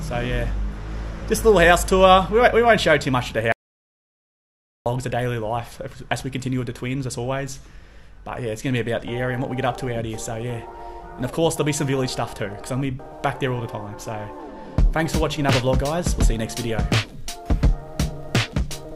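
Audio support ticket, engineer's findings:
Audio dropout to silence, 3.52–4.86 s, about 1.34 s lost. Sound cuts off abruptly mid-flow, returns abruptly. Gap is silent, no room tone, noise floor vanishes entirely. Likely cause: input path lost upstream (device disconnect, link failure or mute) while recorder/encoder kept writing zeros. Content during gap unrecoverable. Check input connection and link stability around that window; hard edges point to capture-side loss rather than gating or fade processing.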